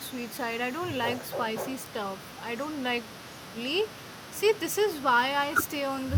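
Section at the wrong speed from 1.24 s to the end: the speech slows to 0.84 times its recorded rate, dropping about three semitones, likely from playback against a mismatched clock.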